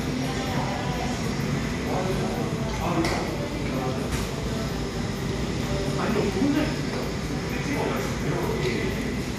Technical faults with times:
0.00-9.38 MP2 compression
2.98-3.32 DAB burbling

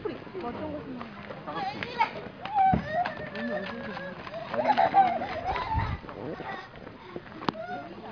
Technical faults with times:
none

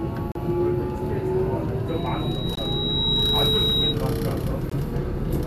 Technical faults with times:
0.32-0.35 gap at a join of encoded pieces
1.88-3.97 loudspeaker feedback squeal
2.55-2.57 gap at a join of encoded pieces
4.70-4.72 gap at a join of encoded pieces

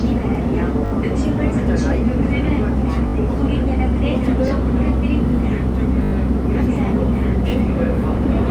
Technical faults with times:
0.86-0.92 repeated buffer
3.08-3.14 repeated buffer
4.48 repeated buffer
6.04-6.12 repeated buffer
7.50 repeated buffer

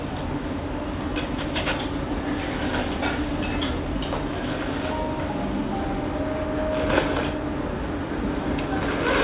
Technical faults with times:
none

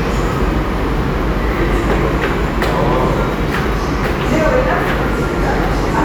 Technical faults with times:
none

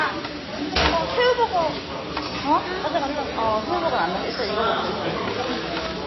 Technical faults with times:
0.00-6.07 MP3 compression

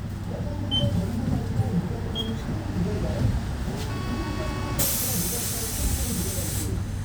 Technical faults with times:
none

